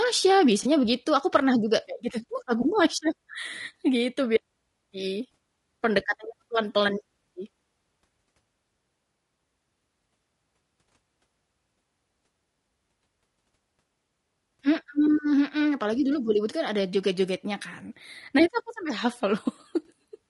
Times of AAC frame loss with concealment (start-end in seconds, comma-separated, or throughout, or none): 0.63-0.66